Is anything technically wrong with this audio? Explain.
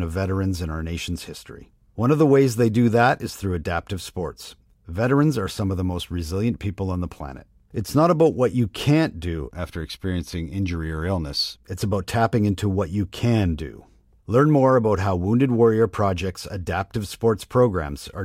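No, nothing technically wrong turns up anywhere in this speech recording, so there's nothing here to flag.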